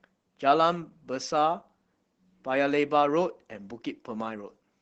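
From start to finish the speech carries plainly audible Opus voice compression in its SILK mode. Content stops near 8 kHz and the excitation is coarsely coded, giving a muffled, hoarse, slightly robotic quality that fits a low bitrate around 12 kbps.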